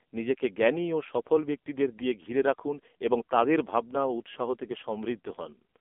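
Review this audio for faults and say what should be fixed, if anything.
AMR narrowband mobile codec, throughout: a 250 Hz to 3.5 kHz band, nothing above 3.6 kHz, and heavy buzz from sparse-pulse vocal-tract modelling near 6 kbps. To prevent it, record or transfer the speech over a wideband path such as a direct file capture instead of a narrowband mobile call.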